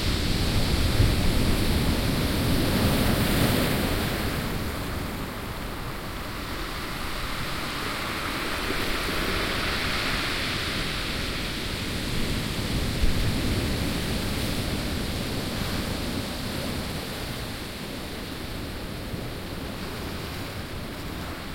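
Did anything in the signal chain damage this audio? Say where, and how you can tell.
No, nothing in the signal chain stood out as damaging this audio on listening.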